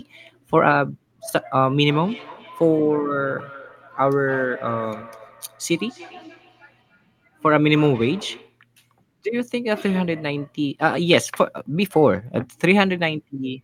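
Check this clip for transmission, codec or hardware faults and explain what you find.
One fault is present: feedback echo between two devices, 1.89 to 8.6 s, repeating roughly every 300 ms at about 20 dB below the speech. Its spectrogram shows faint delayed copies of each syllable.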